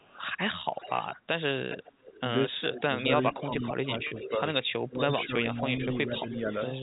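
From 0.00 to 0.22 s, 0.71 to 1.16 s and 1.69 to 2.20 s an echo leak is heard: a faint delayed copy of the speech, trailing by about 410 ms at roughly 15 to 20 dB down. It is likely caused by a far-end loudspeaker echo that the echo canceller failed to remove.

Between 2.70 and 4.39 s the speech is suppressed in double talk. The level dips by up to roughly 20 dB, in pieces adding up to under a second. This is likely the canceller ducking the talker while it contends with echo.

From 2.96 to 6.75 s the echo leak returns more strongly, about 430 ms behind and only about 10 dB under the speech.

At 4.08 to 4.11 s a 30 ms packet loss is bridged by pitch repetition, heard as a brief held, buzzy tone.

From 4.89 to 5.32 s the speech is suppressed in double talk again. It drops by up to roughly 15 dB over about 0.3 s, likely from the same ducking.

Throughout, the G.711 mu-law telephone coding limits the audio to the narrow telephone band below 4 kHz.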